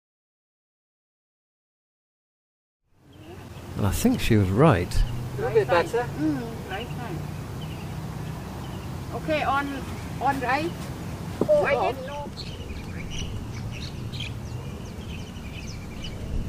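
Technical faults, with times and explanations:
No technical faults heard.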